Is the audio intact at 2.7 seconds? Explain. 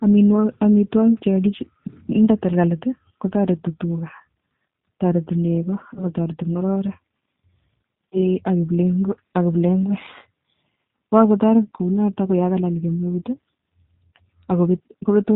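No. At 2.7 seconds the speech carries G.729 codec damage, present for the whole clip. The speech is rebuilt from a vocal tract model, pitch prediction and a few pulses per frame, which fits 8 kbit/s coding. Nothing above 4 kHz survives. It sounds muffled, rough and plainly synthetic.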